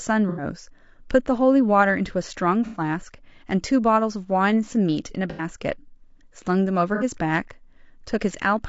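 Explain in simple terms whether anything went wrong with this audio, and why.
The speech sounds rough and grainy the whole way through. There is a hiss between the tones of the voice, and the top end sounds thin and artificial. The likely cause is low-delay AAC compression, the kind used for video calls.

Four short patches sound smeared and noisy: 0.29 to 0.43 s, 2.66 to 2.80 s, 5.30 to 5.44 s, and 6.95 to 7.04 s. This is AAC frame loss with concealment. Small pieces of audio went missing, and the player patched each gap with a guess.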